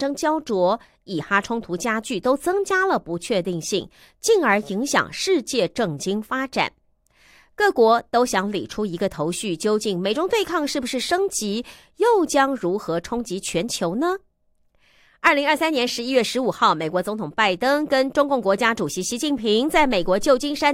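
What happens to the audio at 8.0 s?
At 8.0 s the speech carries on cleanly, with no dropout, click, distortion or other fault at that moment.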